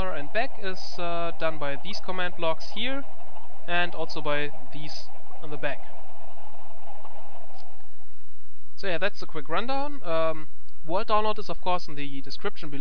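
No technical faults can be heard anywhere in the recording; the signal stays continuous and stable throughout.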